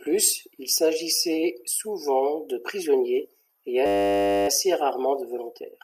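Speech, interrupted by a system hang loop from 3.86 to 4.48 s. The playback stalled while the hardware kept replaying one 10 ms slice of its buffer, producing a steady 100 Hz buzz. The waveform shows an identical repeating cycle, and the spectrogram shows flat horizontal harmonics at multiples of 100 Hz. Virtually no speech was skipped.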